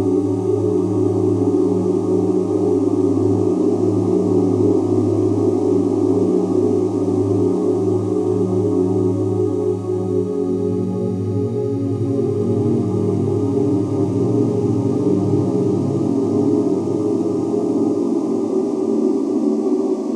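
No technical faults can be heard anywhere.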